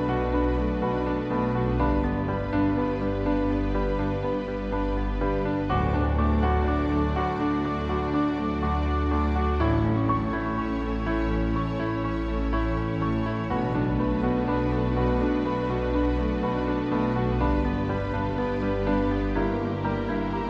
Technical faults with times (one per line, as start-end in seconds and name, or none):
none